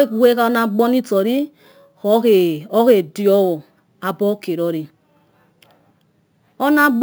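A speech recording carrying imaging from sample-and-hold upsampling for its whole length. The audio was raised from 16 kHz to 44.1 kHz by holding each sample rather than interpolating, so no filter removed the mirrored spectrum. The first image fills the 8 to 16 kHz band at about 24 dB below the speech, heard as a metallic fizz that tracks the talker's level, with its lowest components moving opposite to the voice's pitch.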